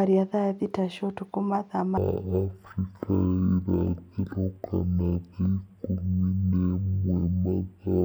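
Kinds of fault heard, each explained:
Stereo read as mono: from 1.98 s to the end, interleaved left and right samples run as one channel, so speech plays at half speed, an octave low.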